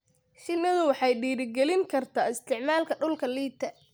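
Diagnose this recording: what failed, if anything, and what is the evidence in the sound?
From 0.57 s to 2.38 s the speech drops about 6.4% in speed and about 114 cents in pitch, a bit over a semitone flat, then returns to normal. Pitch and tempo move together, so this is a rate change rather than pitch processing. That points to the driver or buffer stage, most likely a drift correction step: clock-matching software briefly slowed playback in one jump to rebalance its buffer, then released it.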